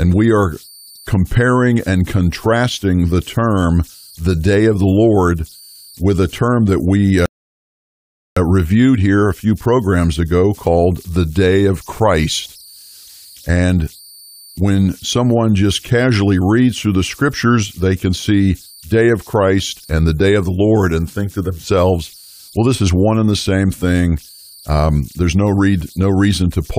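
Right from the start there's a whistle up around 5 kHz, sitting about 29 dB below the speech, plus some grainy hiss under the quieter bits. Those are converter idle tones: an undithered delta-sigma converter slipping into repeating bit patterns whenever its input gets small.

Then at 7.26 s, just after "a term that we", everything drops to silence until 8.37 s, picking up cleanly with "reviewed here a few". That's a rebuffering stall. The player ran dry and waited for data, adding about 1.1 s but losing nothing.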